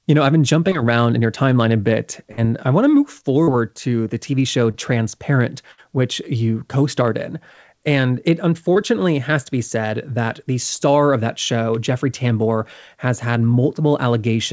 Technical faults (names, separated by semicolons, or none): short concealed packet loss; burst of packet loss